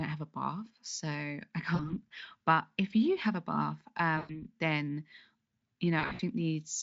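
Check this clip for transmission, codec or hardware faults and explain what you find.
Yes, there is VoIP packet loss concealed by the speech codec, at 1.75–1.98 s after "so I", at 4.17–4.32 s after "you have a bath", and at 5.99–6.22 s. The gaps are about 40 ms, 120 ms, and 160 ms scattered over 200 ms. The decoder extrapolates the last pitch and filter with falling gain, so the speech smears into a fading buzz.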